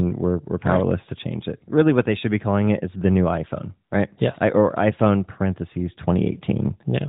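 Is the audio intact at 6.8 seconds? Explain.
Yes, the audio is intact at 6.8 seconds, with no fault at that moment.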